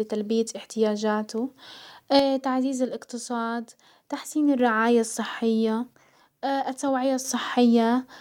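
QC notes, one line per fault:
2.19–4.59 s and 5.94–7.25 s, one channel drops out: the speech steps down by about 6 dB and back up abruptly at each boundary, with no fade and no change in tone. This is likely one stereo channel lost before the mono sum, not a gain ride.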